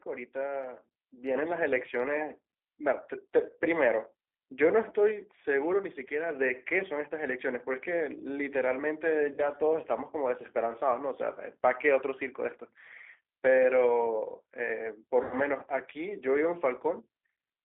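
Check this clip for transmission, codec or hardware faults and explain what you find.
Two faults are present: low-bitrate speech coding across the whole clip, and two short dropouts patched over by the decoder.

G.729 codec, throughout: The speech passes through a low-rate voice codec whose character points to G.729A at 8 kbit/s. The decoder rebuilds each short frame from a vocal tract filter, a pitch predictor and a handful of pulses rather than sending the waveform. The line band runs only from about 300 Hz to 3.5 kHz, so the speech sounds thin and boxed-in, and the coding damage is plainly audible as a rough, slightly synthetic grain on every syllable.

VoIP packet loss concealed by the speech codec, 9.34 to 9.44 s and 15.23 to 15.35 s: Packets went missing, and the decoder filled the gaps by extending its last pitch and filter settings while turning the level down frame by frame. The first gap is about 40 ms of lost audio, which fits two 20 ms packets. 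The second is about 80 ms, which fits four. Each time the speech smears into a brief buzzy tone or coloured noise that fades, and it stays weak and distorted for a moment after real audio returns, because every decoded frame builds on the state left by the one before.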